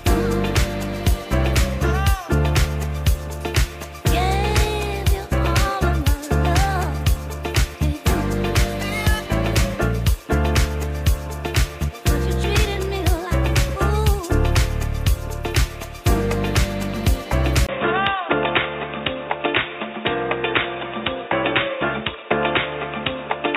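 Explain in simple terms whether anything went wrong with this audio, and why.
Something does go wrong, at about 17.67 seconds. There's a tiny gap of around 20 milliseconds, and from then to the end the sound goes dull and boxy, with nothing above roughly 3.8 kHz and a faint new background noise underneath. The loudness stays about the same. That pattern points to an input switched to a poorer device, likely the recording jumping to a different mic or a headset's call mode, which carries a narrower range of sound.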